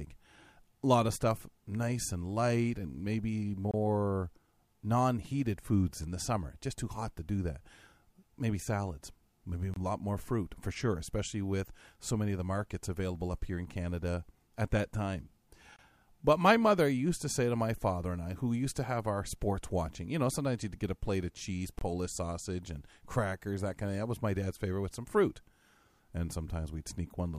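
At 3.71–3.74 s, 9.74–9.76 s, 15.76–15.79 s and 21.79–21.81 s the speech drops out in a gap between chunks: a hard-edged hole of about 25 ms recurring every 6 s, where the stream's chunks are joined with silence between them rather than butted together.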